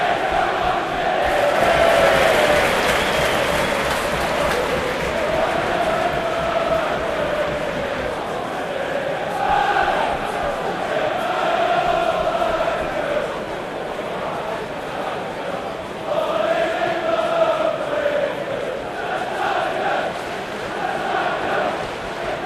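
Nothing in this recording of sounds stands out as a technical problem; it all comes across just as it should.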